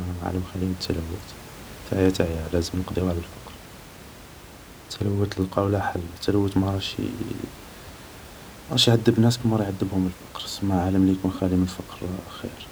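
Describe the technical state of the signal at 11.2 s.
At 11.2 s the speech signal is intact, with only the room's own background noise audible at about 19 dB below the speech.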